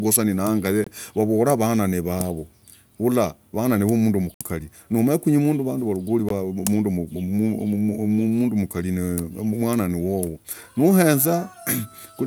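The speech drops to brief silence at 0.84 to 0.87 s, 4.34 to 4.41 s and 6.29 s, then resumes, likely a Bluetooth stall where delayed packets emptied the headphones' buffer.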